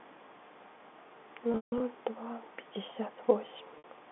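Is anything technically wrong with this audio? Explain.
Yes. Packet loss with pitch repetition occurs at 1.52–1.80 s, where 200 ms went missing across 280 ms, including one 160 ms run, and briefly at 3.78–3.84 s, a 60 ms loss. The receiver loops the last pitch period to fill each gap, fading it out, so the short loss sounds like a held, buzzy tone and the longer one dies toward silence before the speech resumes. The telephone-band G.711 coding, limited to roughly 200 Hz–3.5 kHz, is not a fault.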